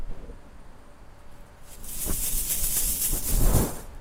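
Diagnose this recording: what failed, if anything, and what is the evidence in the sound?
From 1.13 s to the end codec artefacts rise suddenly, with no gap: a network-stage adaptive stream at a lower bitrate, consistent with Opus falling from 64 to 24 kbit/s.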